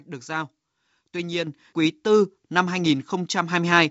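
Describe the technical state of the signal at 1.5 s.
Right around 1.47 s there's a microphone volume step-up, just before "quý tư năm". The call software judged the mic too quiet and bumped the device's input gain in a single jump of about 7 dB, so the voice and the background noise floor both lift together at that instant rather than ramping. You hear it as a sudden loudness shift, sitting on top of the clean 64 kbit/s G.722 wideband coding.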